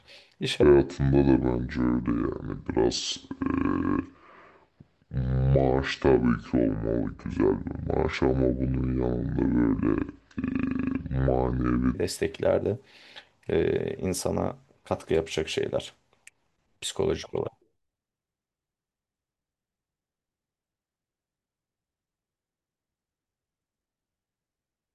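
A wrong sample rate affects this speech clip from 0.63 to 11.95 s. Audio recorded at 48 kHz plays at 32 kHz, so voices drop about 7 semitones and run at two-thirds speed.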